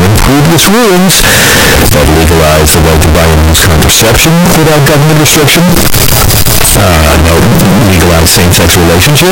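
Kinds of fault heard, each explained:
Float read as integer: The speech sounds extremely loud and harsh for its full length. Quiet background noise comes through as loud as the talker, yet pitch stays traceable. The likely cause is 32-bit float samples read as 32-bit integers, so sign and exponent bits now set each sample's value. A waveform view shows a near-square signal sitting at an almost fixed, high level, and a spectrogram shows dense broadband energy across the whole clip.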